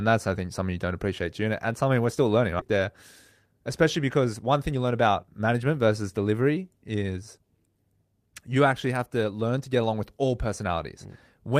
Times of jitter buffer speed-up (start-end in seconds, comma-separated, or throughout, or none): 3.15-3.54, 4.54-5.87